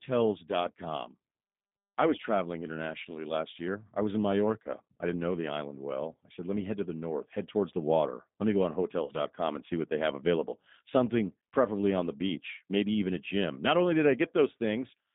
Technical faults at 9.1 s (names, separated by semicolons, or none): G.729 codec; VoIP packet loss concealed by the speech codec